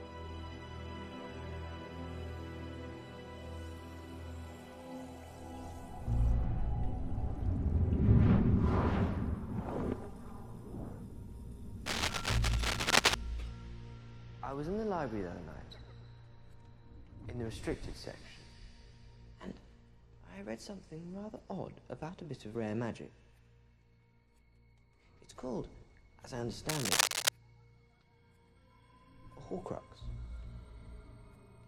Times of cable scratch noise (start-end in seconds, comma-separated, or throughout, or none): 11.86-13.15, 26.69-27.29